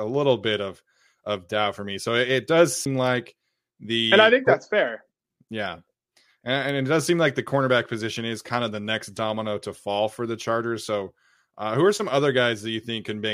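A CD skip at 2.85 s, just after "it it does", is heard as a short tick and a brief dropout of roughly 10 ms, after which the speech resumes from a different point. A physical knock or a flaw in the disc surface threw the laser off its track onto a neighbouring turn of the spiral, so the player muted momentarily and carried on reading from there, breaking the continuity of the speech.

A bit error spike at 3.07 s, and another at 6.69 s just before "and it does seem", each sound like a single sharp tick with broadband content that has nothing to do with the speech around it. In each case one bit in one sample was flipped somewhere in storage or along a digital link. The sample's value leapt by a power of two and then fell straight back, leaving a one-sample click.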